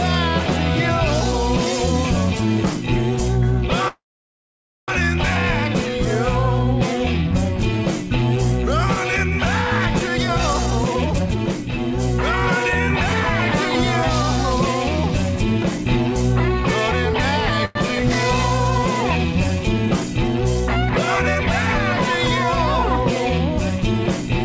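At 3.88 s the packet flow stalls and the jitter buffer runs dry, likely a call audio freeze. The receiver stretches the last sound into a short fading buzz and then holds about 0.89 s of near silence. At 4.91 s the audio resumes exactly where it stopped, so nothing is lost, but a one-second gap has been inserted and the call now runs a second further behind.

From 10.16 to 11.91 s the buffer is holding more audio than its target, and a jitter buffer speed-up trims away repeated pitch-period slices, around 0.7 s in total. Playback runs at 135% with unchanged pitch and sounds clearly rushed. Gentler speed-ups at 105% follow from 15.38 to 16.16 s, cutting roughly 50 ms, and from 23.19 to 24.30 s, cutting roughly 70 ms. Both sound hurried.

At 17.65 s a second, much shorter call audio freeze, likely from another stall in the packet flow, fills about 0.1 s with a brief buzz continuing the last sound, with no silence. 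The audio picks up again at 17.78 s with nothing missing. Across the whole clip, the band-limited G.722 call path keeps everything below 8 kHz.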